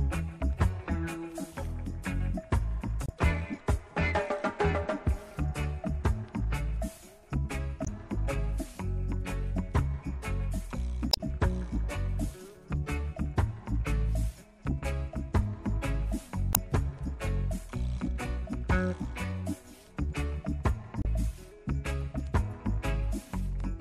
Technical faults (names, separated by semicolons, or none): MP3 compression; damaged data in a compressed stream